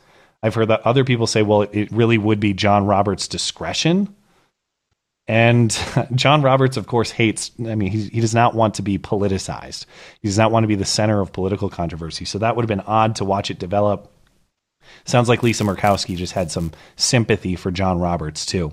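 From 15.37 to 17.08 s the speech carries a buzz at 188 Hz, which points to a filter restarted on every block, likely 256 samples long. The filter drops its state at each boundary and starts from silence, so every block opens with a small click. These form a steady tick train that rises and falls with the speech level.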